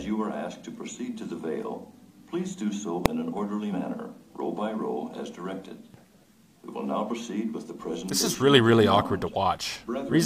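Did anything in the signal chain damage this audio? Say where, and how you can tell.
Yes. There are invalid numbers at full scale at 3.06 s. The fault lives in a processing or sample-format stage, where a calculation produced infinite or invalid values. Those got forced to the largest value the format allows. The output jumps to one extreme and holds there for about 0.67 ms, which fits a 32-sample processing block. A block that short can't be heard as a pop at each end. It lands as a single bang, far louder than the surrounding audio.

There is also damaged data in a compressed stream, at 3.69 to 3.74 s and again at 7.06 to 7.11 s. This is a codec, storage or transport problem. Part of the encoded bitstream was corrupted, so the decoder could not read those frames. It lost sync and had to hunt for the next valid frame header. Each event lasts about 45 to 50 ms. It breaks the flow as a chirp, squawk, click or short hole.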